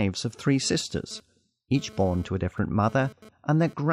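Speech with GSM phone buzz from 0.63 s to 3.74 s, just after "of three": a raspy, harmonic-rich 217 Hz buzz about 23 dB below the speech, coming and going as a nearby 2G phone's data bursts are rectified. Unlike smooth 50 or 60 Hz mains hum, it is gritty and intermittent.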